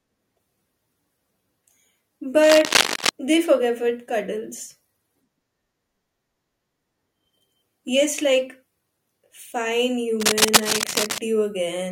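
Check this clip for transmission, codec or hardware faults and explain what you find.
Two kinds of fault are present: cable scratch noise in two places and one overlap between stream segments.

Cable scratch noise runs from 2.44 to 3.09 s, just before "they forgave it cuddles", and again from 10.20 to 11.19 s. Dense, ragged bursts of noise sit over the speech, at about the same level as the speech. It sounds like scratching or rustling. The likely cause is a worn cable, connector or control being moved. Its contact resistance jumps about quickly and injects this noise.

The overlap between stream segments falls at 7.58 s. A tiny slice of audio is missing, and the waveform jumps across the gap. It is heard as a brief click or skip. This happens when two stream segments claim overlapping time and the player trims the overlap, even though the sound was not actually duplicated. The pattern fits a stream delivered in 6-second segments.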